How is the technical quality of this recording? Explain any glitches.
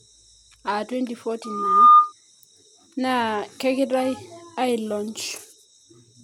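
The recording has one clear fault, a loudspeaker feedback squeal from 1.44 to 2.13 s. A microphone was picking up a loudspeaker it was feeding, and at 1.2 kHz the loop gain went past unity, so that frequency fed on itself. The tone swells over just under half a second to roughly 15 dB above the speech and holds as a piercing whistle until it stops at 2.13 s.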